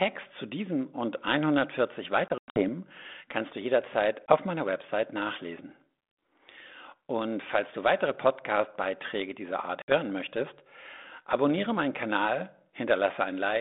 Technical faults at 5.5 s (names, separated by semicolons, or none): none